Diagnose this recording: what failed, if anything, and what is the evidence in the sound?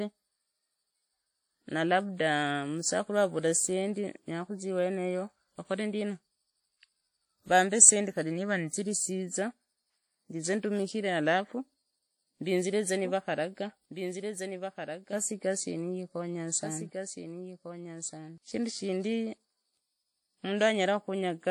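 Codec stage. WMA compression damage is plainly audible throughout. The speech rings and sounds washy. Hiss rises and falls with the signal. The likely cause is a WMA 1 encode at about 48 kbps. Its long transform blocks spread quantisation noise across tens of milliseconds.

Capture or editing stage. A doubled audio track starts at 12.94 s, after "ndizire za". A dry, full-band copy trails by about 1.5 s, about 5 dB quieter. It stops abruptly at 18.38 s, before "shindu shindi". A slower second capture path was likely mixed in.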